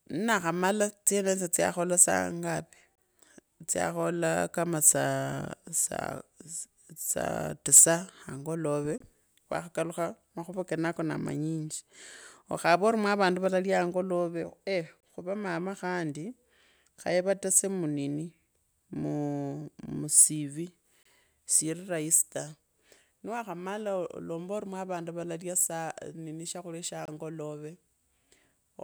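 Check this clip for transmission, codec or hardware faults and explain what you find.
There is one transmission fault: a gap between chunks. The speech drops out in short, hard-edged silences of about 25 ms each, every 6 seconds: at 2.95 s just after "tsyaakhola saa ngapi", at 8.98 s between "saal tisa angolove" and "wakhakalakha makhuva kenakonaa", and at 15.00 s, 21.03 s and 27.05 s. The audio was delivered in 6-second chunks, and silence was inserted at each join, interrupting the speech without losing any of it.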